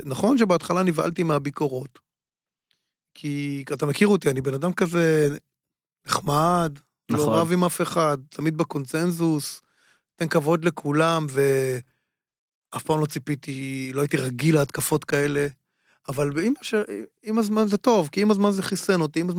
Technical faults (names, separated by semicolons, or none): none